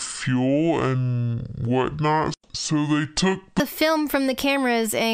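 From the start to 3.60 s the audio is a section at the wrong speed: it plays at about 0.58 times its proper rate, so everything in that stretch is dragged out and sits roughly ten semitones too low, deep and sluggish, before snapping back to normal pace and pitch for the rest of the clip. Because speed and pitch drop together, the likely cause is that this portion was played back or edited against the wrong clock rate.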